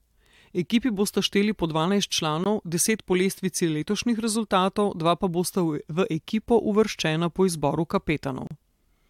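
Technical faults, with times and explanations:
2.44 s and 8.47–8.51 s, gap between stream segments: the sound cuts to dead silence with hard edges, about 18 ms right after "bosta šteli po dvanajst", just before "deset po lestvici", and a longer 35 ms hole after "ekipo uvrščena po izboru". The timestamps of neighbouring segments don't quite meet, so the player pads the shortfall with silence. Nothing is actually lost. The spacing of roughly six seconds fits 6-second segments.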